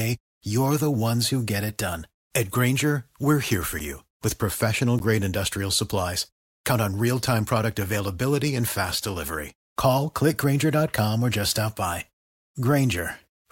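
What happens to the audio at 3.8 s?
At 3.8 s, right after "we're here for" and before "you with professional grade", the speech drops out for about 9 ms. It is a block of digital silence: a run of samples replaced by zeros. The sound stops and restarts with no fade. The hole is too short to register as a gap, so it comes across as a tick or dip.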